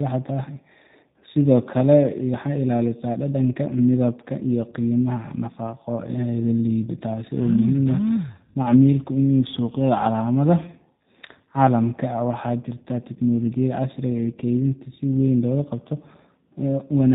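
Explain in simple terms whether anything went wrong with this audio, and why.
Yes, something went wrong, from start to finish. This is tandem speech coding. The speech passed through two speech codecs in a row, G.726 and then G.729A. Each squeezed what the last had already damaged. So the voice sounds rough, muffled and warbly, with nothing above 3.8 kHz.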